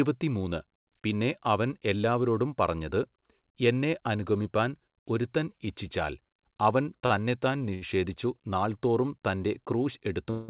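Speech carried over a narrowband call path, with nothing above 4 kHz, which fits a G.711 mu-law codec. Two short stalls from late packets occur, at 7.06 to 7.12 s and 7.74 to 7.84 s. Each time the jitter buffer emptied and the last sound was stretched, by about 40 ms and then 76 ms, before resuming where it left off. On a spectrogram these show as brief horizontal smears of frozen harmonics. Then, from 10.31 s to the end at 10.50 s, a call audio freeze holds the final sound as a fading buzz or hiss for about 0.18 s without reaching silence, likely from delayed packets draining the buffer. The waveform shows a decaying, repetitive tail, and the spectrogram shows flat, unchanging bands.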